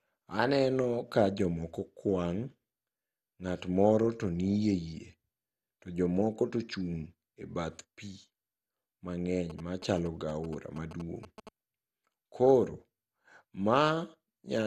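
Throughout, the speech sounds dull and gurgling, with granular distortion and nothing above 12.2 kHz, likely MP2 compression at a low bitrate near 64 kbps that switches off upper sub-bands. From 9.50 to 11.49 s, a galloping dit-dit-dit of short 217 Hz buzzes sits well below the speech. These are GSM signalling bursts from a nearby 2G phone that the audio circuit rectifies.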